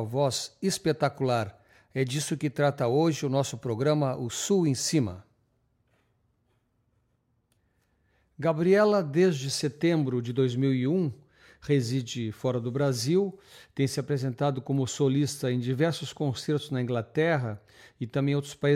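No technical faults can be heard anywhere in the audio. There is nothing in it that needs a time or a cause.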